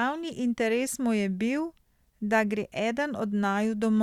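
No technical faults are audible anywhere in this speech recording.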